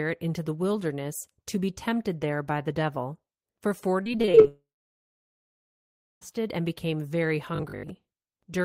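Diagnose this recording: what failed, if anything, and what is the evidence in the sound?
From 4.03 to 4.46 s the speech turns choppy, with six brief holes, the longest about 23 ms. This is repeated packet loss (robotic sound) on the network path. Packets went missing or arrived too late six times in quick succession, about 120 ms in total. Each time the receiver patched the gap by stretching the last received sound, so nearly a third of that stretch is synthetic fill rather than real speech.

Right after, from 4.48 to 6.23 s, the sound trails off as a brief fading continuation, then goes silent for about 1.57 s before speech resumes with a chunk clearly absent. This is a long network dropout, likely a stall where nothing reached the receiver for about 1.74 s. Concealment held the last sound only briefly, and the missing audio was never recovered, so the speech picks up further along.

Between 7.55 and 7.89 s the speech becomes a rigid buzz pinned at 50 Hz. 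It still loosely tracks the speech contour but sounds mechanical. This is robotic sound from repeated short buffers, likely at the driver or buffer stage. Fresh audio came in too rarely, and the software kept looping the most recent 20 ms, whose repetition rate sets that 50 Hz pitch. Roughly half the real audio in that span was skipped.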